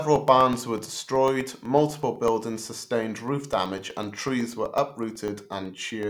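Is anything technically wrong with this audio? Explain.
Yes. From 0.16 s to 6.03 s there are periodic USB or driver dropouts, every 0.125 s. Something blocks the audio path at that fixed interval. About a millisecond of speech is replaced by silence each time, around fifty times, giving steady ticks wherever speech is present.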